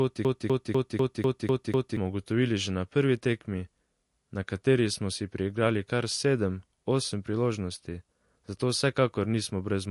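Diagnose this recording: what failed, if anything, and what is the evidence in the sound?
A playback or streaming buffer likely stalled and kept re-sending its last fragment, giving a broken-record loop already under way at 0 s. A piece of about 0.25 s repeats exactly, seven times, until 1.97 s, just before "ugotovili že na prvi". The speech that should have played there is lost.

The speech is likely passed through a low-bitrate MP3 codec, with a sound that points to roughly 48 kbps. The encoder ran short of bits, cutting everything above 11.3 kHz and letting weak frequency lines flicker between frames. The result is plainly audible watery, swirling artefacts throughout.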